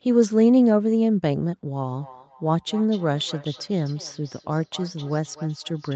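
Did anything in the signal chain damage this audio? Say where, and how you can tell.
Yes. From 1.91 s to the end of the clip there is feedback echo between two devices, a fault in the acoustic loop around the call processing. The speech comes back about every 0.3 s, thinner and more ringing with each pass, and at its loudest sits about 20 dB below the direct speech. A second device in the room is likely replaying the call, and this microphone is picking it up. Its echo canceller only removes its own playback. The 8 kHz band limit from the Opus call path is heard on the repeats too.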